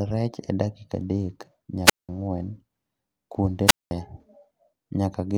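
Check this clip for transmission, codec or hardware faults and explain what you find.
Two wireless microphone squelch dropouts occur in this speech clip. The first runs from 1.85 to 2.09 s, the second from 3.66 to 3.91 s. The radio link fades, and the receiver's squelch mutes the output. Hiss rises briefly, then near silence lasts about 0.19 s and 0.21 s.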